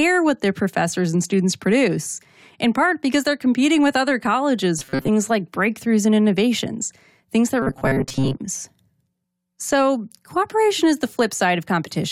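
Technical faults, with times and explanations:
4.79–5.10 s and 7.62–8.37 s, robotic sound from repeated short buffers: after "competing with other colleges" and again after "and innovations things that", speech becomes a rigid metallic buzz at 134 Hz, likely from late audio being covered by replaying a 7.5 ms buffer, which fills about half, then most, of each span.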